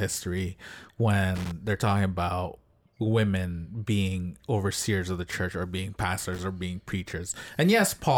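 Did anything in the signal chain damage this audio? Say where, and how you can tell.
Yes. Loose connector crackle appears twice in this speech, from 1.35 to 1.52 s and from 6.23 to 6.40 s, each burst lasting about 0.17 s. This is an analogue wiring fault: a worn or dirty contact making and breaking as it moves chops the signal into irregular scratching. Its ragged, uneven texture separates it from digital dropouts or buffer glitches, which sound cleaner-edged.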